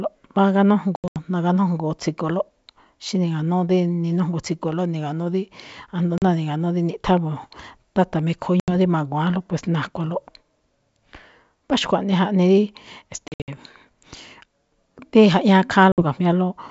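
Packet loss on an ADPCM call cuts hard silent holes at 0.96, 6.18, 8.60, 13.28 and 15.92 s. Each resumes slightly distorted as the predictor resyncs.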